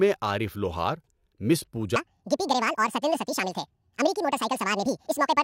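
From 1.96 s onward, a section at the wrong speed plays 1.91 times fast, likely from a clock mismatch. The speech turns high and hurried, about ten semitones up. On a spectrogram, the harmonics jump upward and spread apart.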